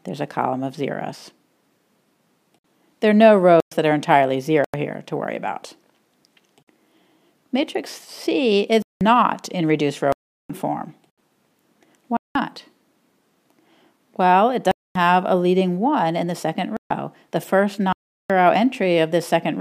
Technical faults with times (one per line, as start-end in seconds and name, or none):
3.60-3.72 block of digital silence
4.64-4.74 block of digital silence
8.82-9.01 block of digital silence
10.12-10.50 block of digital silence
12.17-12.35 block of digital silence
14.71-14.95 block of digital silence
16.77-16.90 block of digital silence
17.93-18.30 block of digital silence